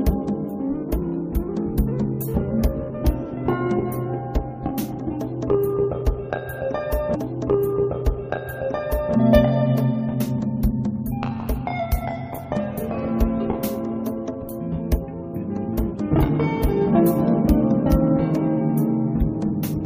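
At 7.14 s there's a stream segment repeated: the player evidently queued the same chunk twice, so about 2.0 s of audio replays, running to 9.14 s. You'll catch a small blip right at the jump back, then that stretch plays again before things move on.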